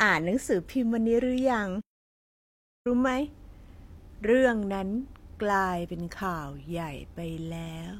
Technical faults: audio dropout to silence

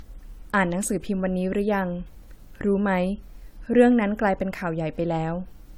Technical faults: generation loss

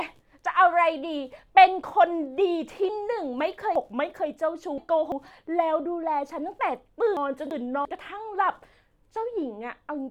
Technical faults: chunks out of order

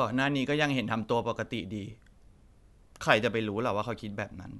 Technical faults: none

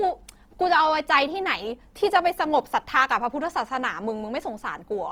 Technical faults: Opus compression

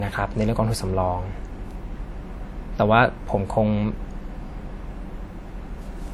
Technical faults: low-bitrate audio saved at a high bitrate

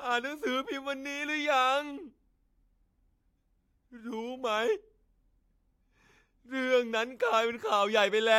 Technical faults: none

